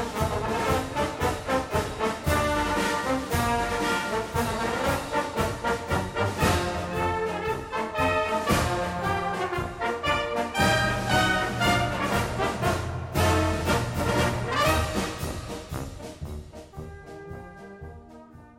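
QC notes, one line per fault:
No faults found.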